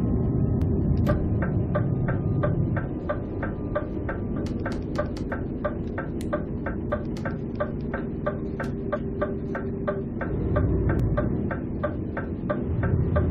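Damaged data in a compressed stream causes brief glitches at 0.62, 4.36, 6.75, 8.93 to 8.97 and 11.0 s, as the decoder loses frame sync; each shows as a thin vertical streak.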